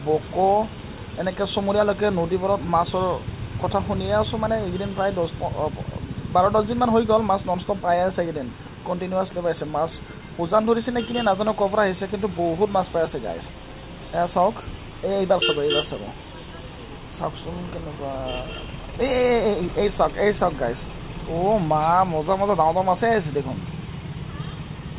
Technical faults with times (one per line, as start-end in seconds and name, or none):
none